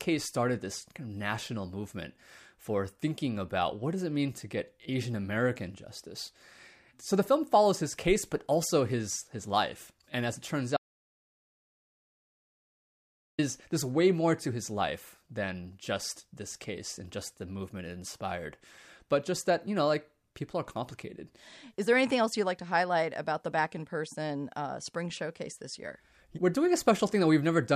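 An audio dropout to silence runs from 10.77 s to 13.39 s, a gap of about 2.6 s in the speech. The signal stops abruptly mid-flow and returns just as abruptly, with pure silence in between and no room tone or background hiss at all. The input feed was likely interrupted while the recorder kept writing silence, so whatever was spoken during that stretch is lost entirely.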